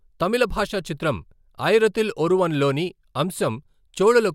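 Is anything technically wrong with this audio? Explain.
No, there's nothing technically wrong that I can hear in this speech recording.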